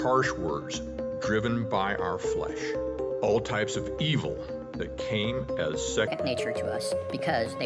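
From 6.08 s to the end, the audio runs fast and sits higher in pitch. This is a wrong sample rate fault: samples are clocked out faster than they were captured, with no rate conversion. Tempo rises by 1.38 times and pitch by about 5.6 semitones, which fits 16 kHz material played at 22 kHz. Speed and pitch move together by the same ratio. A pitch shifter would keep the timing, and a time-stretch would keep the pitch.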